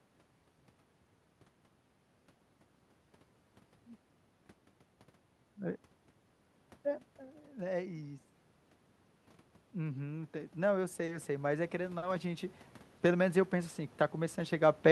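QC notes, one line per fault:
9.74 to 14.91 s, automatic gain rising: The voice and the room noise swell together, slowly, over several seconds until the clip ends, instead of the voice alone changing level. The input level fell by about 12 dB, and the automatic gain control responded by raising its gain step by step to restore loudness. Because the gain applies to everything the microphone picks up, the background noise rises in step with the voice, which gives it away.
11.05 to 11.11 s, 11.98 to 12.05 s and 12.98 to 13.03 s, short stall from a late packet: Each time, a sound is briefly held too long, with a faint buzz or dip, and then the audio carries on without any gap. A packet arrived late, so the jitter buffer ran empty, and the receiver stretched the last sound by 30, 40 and 20 ms respectively while it waited. Nothing is lost, but the playback delay grows by the same amount each time.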